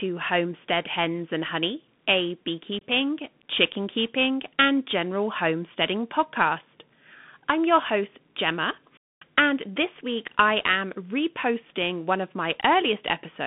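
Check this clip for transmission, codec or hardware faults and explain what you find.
Two faults are present: a narrowband Bluetooth link and one brief dropout.

Bluetooth CVSD headset codec, throughout: the band is confined to roughly 150 Hz to 3.5 kHz, and the one-bit adaptive step coding leaves scratchy sibilants, slope distortion and granular hiss, consistent with a 64 kbps CVSD link.

Unconcealed Bluetooth headset packet loss, 2.79 to 2.81 s: a 22.5 ms hole with abrupt edges, likely a few lost packets replaced by silence, with a quieter recovery as the CVSD step adapts back.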